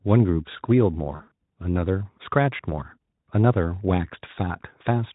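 VoIP packet loss concealed by the speech codec appears in this speech clip from 1.15 to 1.35 s. Over roughly 200 ms, about 140 ms of audio went missing in scattered gaps, the longest lasting 60 ms. For each gap, the Speex decoder kept repeating its last pitch and spectral shape at falling gain, so the speech smears into a fading buzzy or tinted-noise sound. Because each rebuilt frame depends on the previous one, the speech stays weakened briefly after the gaps end.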